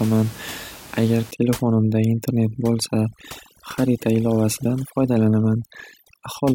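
From 1.31 s right through to the end, you get overdone noise removal. The noise reducer is clamping too hard, shutting off any frequency band that sits close to its noise estimate, so the room noise, about 19 dB under the speech, drops away and breaks up into little twinkling specks. The softer parts of the voice get caught too.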